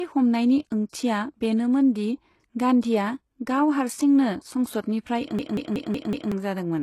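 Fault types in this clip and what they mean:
HE-AAC compression: likely cause of the plainly audible damage throughout, with nothing above 12.3 kHz and a replicated, gritty treble that points to roughly 16 kbps.
System hang loop: from 5.39 to 6.32 s, a 186 ms piece repeats five times at 5.4 Hz as a stutter, losing about a second of sound.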